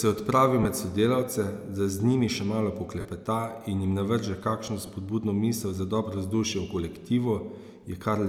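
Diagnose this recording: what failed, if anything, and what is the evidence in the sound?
Lost LE Audio frames on the Bluetooth link: short noisy smears at 0.63–0.65 s after "je odpravil", 3.00–3.05 s after "z njimi še malo", and 4.86–4.89 s before "spodbudno misel za dobro". The LC3 decoder filled each gap with the last spectrum under random signs. That produces a smear rather than the silent hole or click of a plain dropout.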